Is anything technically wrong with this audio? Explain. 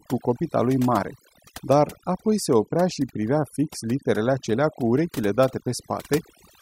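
Yes. Throughout the speech, overdone noise removal is audible. A noise reduction stage set far too aggressively pulls down any frequency band whose level sits close to its noise estimate. The softer parts of the voice get caught along with the noise. Between phrases the background collapses to near silence dotted with twinkling specks. On a spectrogram this appears as isolated flickering dots in the gaps and ragged, hollowed-out harmonics.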